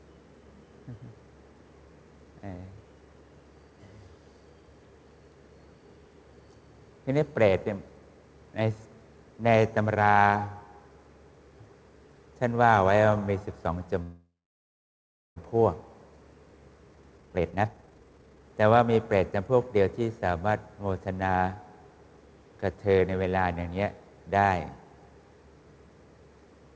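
From 14.02 to 15.38 s a call audio freeze fills a gap with a fading buzz that sinks to silence. Audio then resumes where it stopped, so nothing is lost, unlike a dropout, likely from delayed packets. From 16.95 to 19.83 s a jitter buffer speed-up plays the audio at 146% speed while its pitch holds. That unchanged pitch sets it apart from a sped-up tape, and about one and a half seconds of delay is removed. Throughout, the G.722 call path leaves nothing above 8 kHz.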